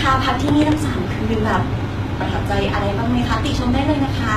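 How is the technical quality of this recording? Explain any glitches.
The recording has plainly audible coding damage from start to finish. HE-AAC compression is the likely cause. The treble is rebuilt rather than original, which fits a low bitrate of around 20 kbps, where only the lower spectrum is truly coded and the highs are rebuilt by copying lower bands upward under a coarse envelope. Those reconstructed highs don't align with the real harmonics, so s sounds in the speech turn gritty and lispy. Nothing is present above 14.9 kHz.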